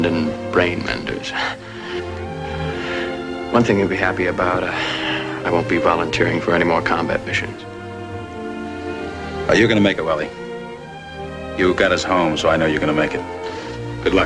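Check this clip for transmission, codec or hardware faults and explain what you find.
Nothing in the clip points to a transmission, codec or hardware problem. There is no fault to report.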